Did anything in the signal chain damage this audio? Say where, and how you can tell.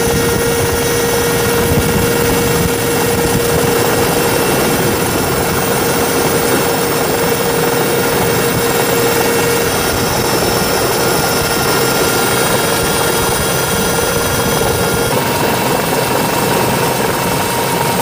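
No, nothing in the signal chain stood out as having damaged this audio on listening.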